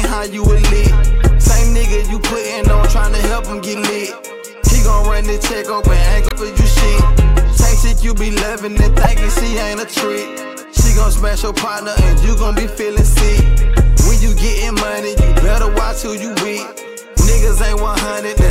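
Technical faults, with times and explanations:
6.26–6.32 s and 9.04–9.06 s, damaged data in a compressed stream: corrupted bytes make the decoder misread frames and lose sync, producing brief glitches of about 60 ms and 26 ms. These show as abrupt disruptions on a spectrogram and abrupt, jagged discontinuities in the waveform.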